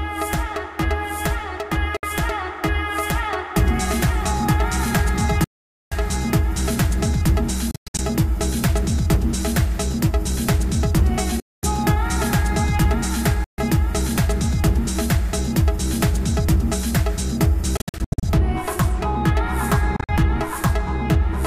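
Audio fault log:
1.97 to 2.05, 5.44 to 5.94, 7.71 to 8.00, 11.40 to 11.64, 13.44 to 13.59, 17.77 to 18.24, 19.96 to 20.11 s: Bluetooth dropout, likely. The sound cuts to silence for 61 ms to 472 ms, or in broken bursts at 7.71, 17.77 and 19.96 s, then returns further along, as if it had kept playing. Unlike a buffer stall, nothing is delayed or repeated; the missing material is simply skipped, because packets arrived too late.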